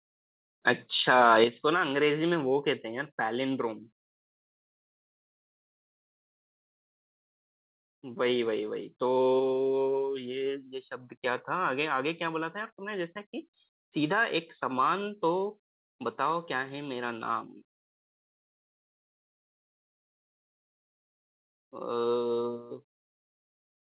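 Microphone overload at 0.67–0.71 s and again at 1.09–1.44 s gives this speech a harsh, crackling edge. The loudest peaks sit about 3 and 4 dB past the converter's limit, likely because the input gain was set too high, so the converter flattens their tops and a small share of samples is cut off. Microphone volume stepped down at 1.44 s, right after the second distorted stretch, dropping voice and background together by 6 dB in a single jump. The likely cause is the call software detecting clipping and cutting the device input gain. The call path leaves nothing above 4 kHz, which fits G.711 mu-law at 64 kbps.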